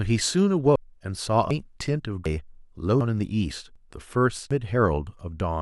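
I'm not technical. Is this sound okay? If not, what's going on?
No. From 0.55 to 0.63 s there's DAB burbling: a brief patch of noisy blips where weak digital radio reception corrupted the audio. Then there is audio missing between chunks. The speech skips at 0.76, 1.51, 2.26, 3.01, 3.76 and 4.51 s, each time losing about a third of a second, likely because the recorder drops audio between one-second chunks.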